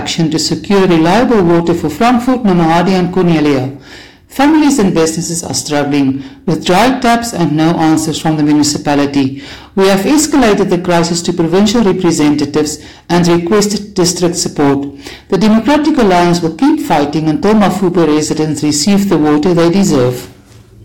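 Hard clipping runs throughout: the audio is driven about 17 dB beyond what one stage can pass, flattening roughly a fifth of samples. The waveform shows squared-off plateaus, and the spectrogram shows bright harmonic smear reaching far up, heard as harsh fuzz.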